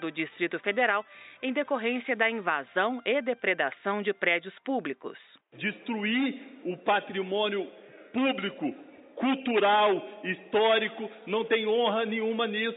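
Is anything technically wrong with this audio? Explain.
No, nothing technically wrong can be heard in this audio; the signal stays steady and intact throughout.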